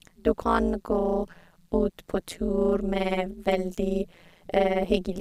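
Throughout the speech, frames were windowed and overlapped in a way that does not sum to a steady gain, producing overlap-add ripple. The level dips by about 60 dB once per frame, at around 150 Hz, giving a harsh, metallic buzz with extra tones around each note over everything.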